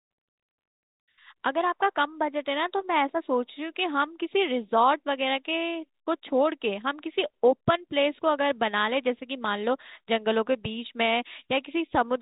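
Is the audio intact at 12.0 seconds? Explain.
Yes, the audio is intact at 12.0 seconds: the speech continues without a break or added fault, heard through the G.711 telephone band that stops at about 3.8 kHz.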